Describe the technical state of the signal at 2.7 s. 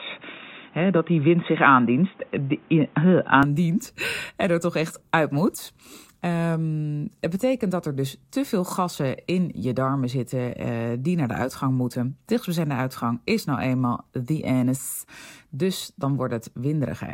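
At 2.7 s the system was likely recording through a poorer input device, a fault running from the start to 3.43 s. That device passes nothing above 3.8 kHz, so the speech sounds dull and boxy, shifted in level by a few decibels, with its own faint background noise.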